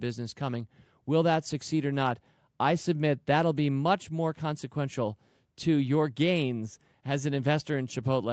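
No technical faults can be heard in the speech, which carries the ordinary sound of call microphone processing, with the lowest bass filtered out and nothing above 8 kHz.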